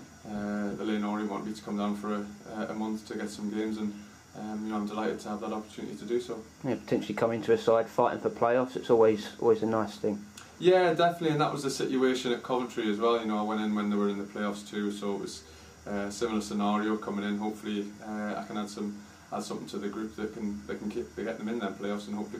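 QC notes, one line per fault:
Nothing here needs flagging; the audio came through without a single problem worth noting.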